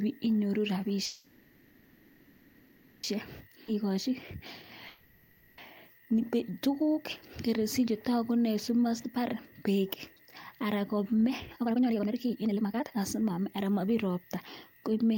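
At 1.05 s there's a call audio freeze lasting until 3.05 s. The last sound gets drawn out into a fading buzz for about two seconds without ever dropping to true silence, then the audio resumes right where it left off. Nothing is lost, but that wait adds roughly 2 s of delay, most likely because packets stalled and the jitter buffer ran dry.

From 3.41 to 4.64 s a jitter buffer speed-up kicks in. The receiver is working off that backlog by snipping tiny pitch-period slices, running about 108% speed at unchanged pitch and trimming roughly a tenth of a second.

Inside that stretch, at 3.67 to 3.70 s, there's a skip ahead. Around a second and a half of audio is simply dropped, and the two sides are butted together with almost no gap, so it sounds like a sudden jump.

At 4.88 to 5.60 s comes a second freeze, the same fading buzz for about 0.7 s. Again nothing is missing, just 700 ms more delay.

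Then right after "anan kome", from 11.47 to 14.43 s, there's a much heavier speed-up at 143%. It sounds noticeably rushed at the same pitch as the buffer sheds roughly a second and a half.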